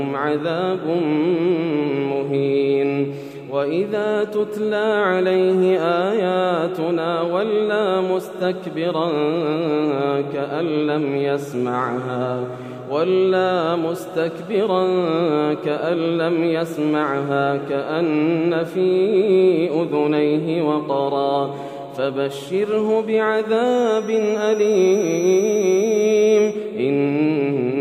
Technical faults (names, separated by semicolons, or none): feedback whistle